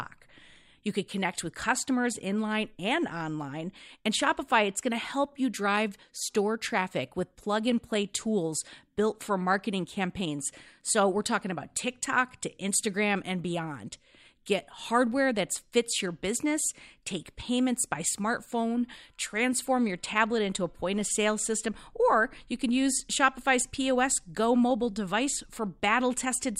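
From 0.10 s to 26.58 s the speech carries a fine, steady rattle of tiny ticks, roughly twenty per second, strongest on loud sustained sounds. These are clock slip clicks, likely from two unsynchronised clocks drifting about 400 ppm apart, each slip dropping or repeating one sample.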